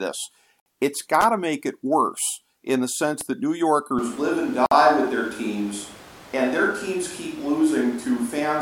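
At 0.60 to 0.66 s a 60 ms gap at a join of encoded pieces cuts the speech. The sound resumes exactly where it stopped, so nothing is lost. Separately encoded pieces were joined with their start delay and end padding left in.

From 1.21 to 1.24 s, just before "to make it worse", a loose connector crackle chops the signal into an irregular scratchy burst. A single clean click would not sound like this.

At 3.99 s the sound abruptly turns roomy and hollow, with thinner bass and room noise about 20 dB below the speech. This is likely a switch to a distant microphone. The level barely changes, and the sound stays this way to the end.

A second join gap of 53 ms follows at 4.66 to 4.71 s, about 4 s after the first. That regular spacing sets it apart from a random dropout.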